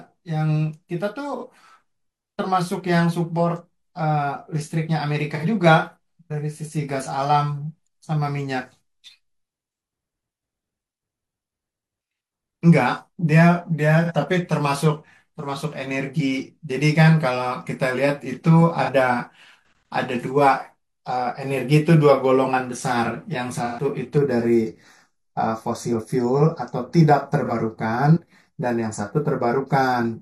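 AAC frame loss with concealment breaks this speech recording six times, at 1.37, 5.34, 14.04, 18.83, 23.65 and 27.45 s. Each gap lasts about 43 ms except those at 5.34 s (85 ms) and 23.65 s (128 ms), fitting one, two and three lost frames. The decoder patches each hole from the last good spectrum, leaving a brief smeared, noisy patch. Channel delay (comb filtering) runs from 24.18 s to the end: one channel trails the other by a fraction of a millisecond and both are summed to mono, so shared content cancels at evenly spaced notches starting around 3 kHz, making the speech sound hollow and phasey.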